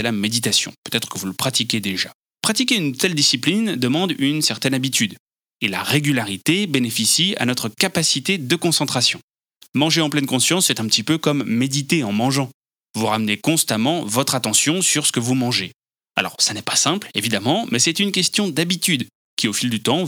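Nothing in the speech stood out as a technical problem on careful listening.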